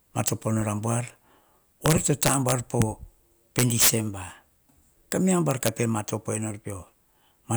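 Integer overflow strikes the speech at 0.28 s, from 1.86 to 2.82 s, from 3.59 to 3.90 s, at 5.12 s and from 5.51 to 5.68 s. The gain pushed peaks past the integer limit by about 5, 4, 10, 3 and 3 dB, and those samples wrapped to the opposite extreme instead of being held. Each one is a harsh crack, worst near 3.6 s. The waveform shows peaks abruptly flipping sign, and the spectrogram shows full-band vertical streaks.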